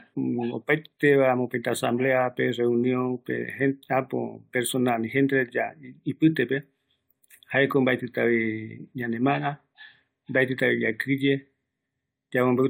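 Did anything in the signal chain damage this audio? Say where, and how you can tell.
No, nothing damaged this audio.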